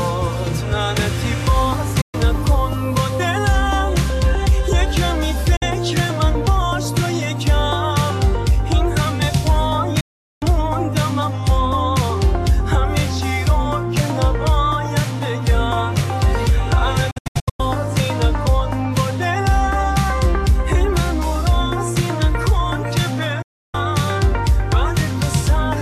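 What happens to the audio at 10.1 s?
A digital broadcast dropout runs from 10.00 to 10.43 s, covering the moment at 10.1 s. The receiver stopped getting usable frames, either because the signal was lost or because frames failed their error check, so it muted its output instead of playing corrupted data. The sound fades out over about 8 ms and stays silent for roughly 0.41 s, a gap that fits around 17 lost frames. It then resumes, and whatever was broadcast during that gap is gone.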